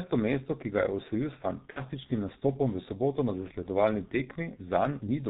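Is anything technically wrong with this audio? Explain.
Yes, there are two faults.

The G.723.1 codec affects the whole speech clip. Its 30 ms frames and low bitrate, which fits about 6.3 kbit/s, cause heavy damage. The voice sounds muffled and hoarse and consonants are smeared, because the coarse, slowly updated voice model discards detail. A spectrogram shows a hard ceiling at 4 kHz with blurred frication.

VoIP packet loss concealed by the speech codec occurs from 1.70 to 1.82 s, just before "nastopom v". About 60 ms of audio went missing, which fits two lost frames. The decoder filled the gap by repeating its last pitch and filter at falling gain, which stretches the sound into a buzzy tone or coloured noise that fades. On a spectrogram the stretched sound runs flat and dims, and the waveform envelope decays before recovering.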